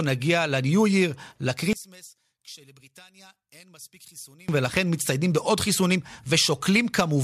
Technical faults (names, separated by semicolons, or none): one channel inverted